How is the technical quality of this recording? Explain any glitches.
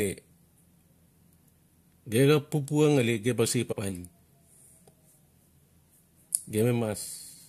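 The recording has one glitch, a case of compressed frames skipped, at 3.71 to 3.73 s, right after "xap papua ngali ge". The speech jumps forward by roughly 70 ms, which fits about three frames of roughly 21.3 ms each going missing or being rejected by the decoder. The skip is heard at the join, where the speech abruptly picks up further on. Unlike a dropout, there is no silent gap; the sound simply resumes slightly further on.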